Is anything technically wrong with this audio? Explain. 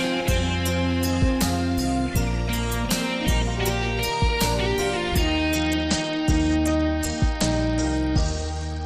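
Yes. From 5.55 s to the end there is a Bluetooth SBC bit pool drop. The encoder's bit budget shrinks sharply, which fits a fall from a bit pool near 31 to about 10. The top sub-bands starve, and the rest are coarsely quantised. Treble dulls and gritty noise rises.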